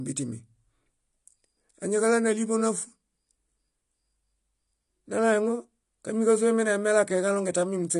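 AAC compression throughout the speech: nothing above 11.1 kHz, with dull, smeared, fizzy detail, likely AAC-LC starving the spectrum at a bitrate around 32 kbps.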